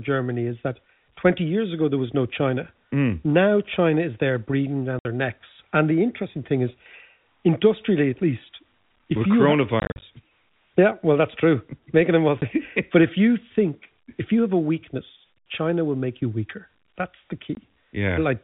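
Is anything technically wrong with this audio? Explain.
Yes. Packet loss filled with silence cuts holes at 4.99–5.05 s (between "is there breathing" and "their necks"), scattered through 9.8–10.02 s, at 12.41 s, and at 17.55–17.57 s. The gaps come in steps that fit 10 ms packets. Each hole shows as a flat waveform line and a blank vertical stripe on the spectrogram, with abrupt edges.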